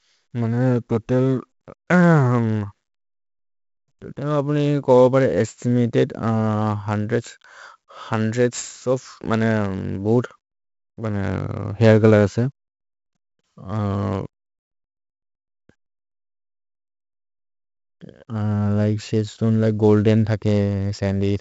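All the way through, the speech carries heavy 4-bit ADPCM compression. Each sample is a coarse 4-bit step off a prediction, so gritty hiss tracks every loud syllable and sharp attacks crunch. Nothing passes 7.7 kHz, which fits a 64 kbps, 16 kHz stream, so it sounds dull too.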